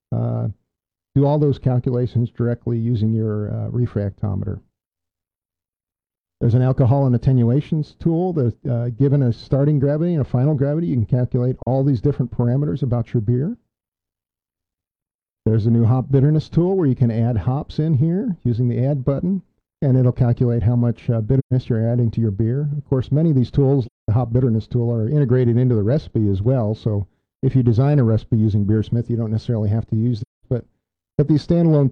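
The audio drops out four times from AAC frame loss with muting, at 11.63 s (about 43 ms), 21.39 to 21.53 s, 23.86 to 24.09 s and 30.21 to 30.46 s. The lengths fit one, three and five lost frames whose spectra were zeroed. Overlapping windows fade each gap out and in. On a spectrogram each gap is a full-band blank column, and the waveform tapers into a brief dip for the single frame and a soft-edged hole for the longer runs.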